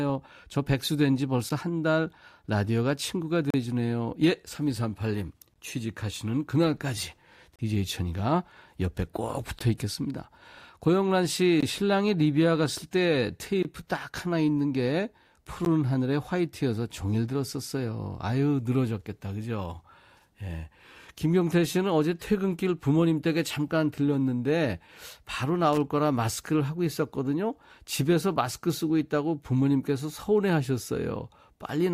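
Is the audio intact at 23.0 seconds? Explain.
Yes, at 23.0 seconds the speech plays through cleanly with no audible dropout, click, distortion or other fault.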